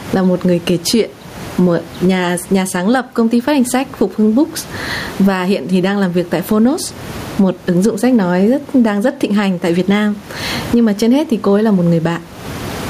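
Gain pumping runs through the whole speech clip, with a level swing of roughly 20 dB. Loud and quiet passages sit unnaturally close together, and the speech sounds squashed. The likely cause is input gain set far too high, with a fast limiter or compressor clamping down on each loud peak. The room noise sits about 30 dB below the speech.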